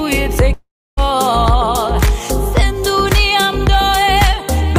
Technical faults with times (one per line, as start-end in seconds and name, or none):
0.53-0.99 long network dropout